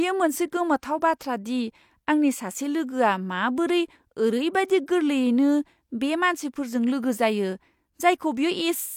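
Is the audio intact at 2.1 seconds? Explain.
Yes, at 2.1 seconds the speech plays through cleanly, with no dropout, click, distortion or other fault audible at that point.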